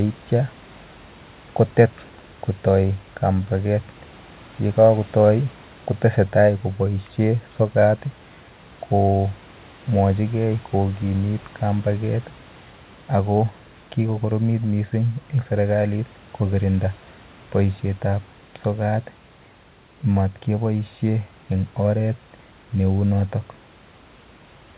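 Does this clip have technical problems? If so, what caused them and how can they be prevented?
No, nothing in this speech stood out as a technical problem on listening.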